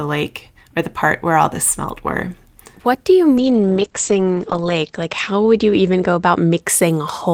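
From 3.38 s to 6.67 s the speech goes through a call bitrate drop. The call's bandwidth estimate fell, so the encoder was pushed from 32 kbps down to 9 kbps and held at that floor for about 1.35 s. With so few bits, coding turns coarse and rough, and the audio bandwidth narrows from 20 kHz to 8 kHz. That leaves the voice muffled and watery until the rate climbs back.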